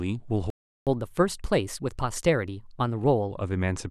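A speech recording with a playback stall: the sound cuts to silence from 0.50 to 0.87 s, a gap of about 370 ms, likely because the player ran short of buffered data. Catch-up at higher speed follows from 0.87 to 3.31 s. The player runs 1.15 times fast to recover the lost time, lifting pitch roughly two semitones before returning to normal rate.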